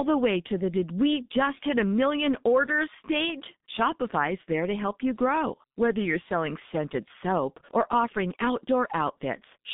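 From start to finish, the speech has passed through the G.723.1 codec, a low-rate telephony coder whose heavy damage points to a setting of about 6 kbit/s. It works in long frames and refreshes its model of the voice slowly, so fast changes get smeared. The line band runs from 150 Hz to 3.7 kHz, with nothing above 3.8 kHz, which leaves the speech muffled and hoarse, with consonants blurred.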